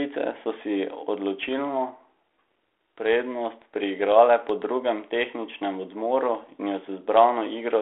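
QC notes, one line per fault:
1.43–1.50 s: bit errors on an ADPCM link. A brief cluster of pops and rough crackle with brief level jumps, from a low error rate of roughly a third of a percent. Each flipped bit knocks the decoder's step size and predictor, so the damage rings on briefly. The G.726 path, which sounds like 32 kbit/s, stays band-limited to telephone width.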